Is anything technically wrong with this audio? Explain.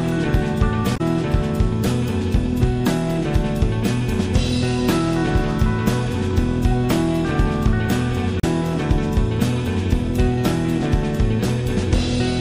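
Yes. Two kinds of fault are audible.

Across the whole clip the sound is plainly degraded: quiet detail swirls and flickers from moment to moment, and sharp onsets are smeared. The likely cause is MP3 compression at a low bitrate, consistent with around 64 kbps. With too few bits, the encoder zeroes weaker frequency lines, which switch on and off between frames and produce the watery texture.

At 0.96–1.01 s and again at 8.39–8.44 s there is a brief glitch. Each is about 50 to 60 ms long. This is damaged data in a compressed stream. Corrupted bytes make the decoder misread or reject the affected frames, lose sync, and jump to the next valid frame header. That produces the short disturbance in the audio.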